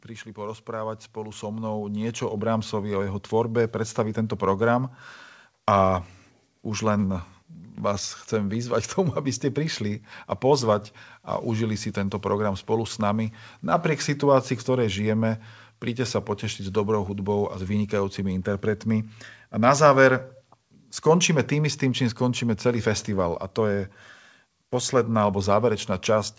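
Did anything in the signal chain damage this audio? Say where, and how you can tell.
Yes. The damage happens at the call-processing stage. The fault is automatic gain rising, from 0.34 s to 4.45 s. Over those four seconds the speech and the background noise swell together, by about 12 dB. That shared rise is the giveaway. A talker getting louder would not lift the room noise too. The gain control judged the input too quiet and ramped its gain up slowly. The codec's band limit at 8 kHz, which fits G.722, is not the cause.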